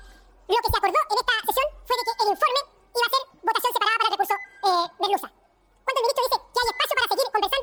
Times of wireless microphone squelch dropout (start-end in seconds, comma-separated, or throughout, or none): none